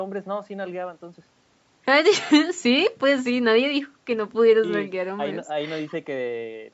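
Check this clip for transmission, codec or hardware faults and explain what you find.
No faults found.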